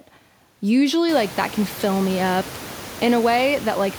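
Nothing's gone wrong here; the only thing you might notice is the room's own background noise, which comes up by about 23 dB at around the one-second mark and then sits about 18 dB below the speech, and that's just the space the microphone was in rather than anything the system did.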